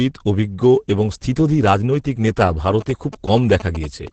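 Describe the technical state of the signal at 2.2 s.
At 2.2 s the speech carries Opus voice compression, present across the whole clip rather than just this moment. The sound is squeezed through a linear-prediction coder in SILK mode at wideband, with its excitation coded coarsely, which fits a bitrate around 10 kbps. The voice comes out muffled, hoarse and a little robotic. On a spectrogram, energy stops at a flat ceiling near 8.8 kHz, and the harmonics below it look blurred and grainy.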